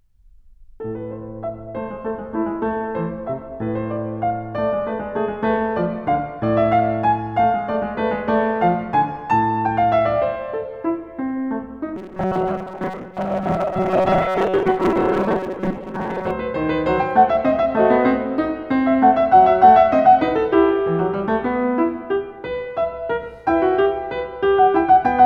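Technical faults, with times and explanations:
11.96 to 16.31 s, robotic sound from repeated short buffers: the music turns into a rigid metallic buzz fixed at 188 Hz. This is likely because audio arrived too seldom, and roughly half the time was filled by looping a slice of about 5.3 ms.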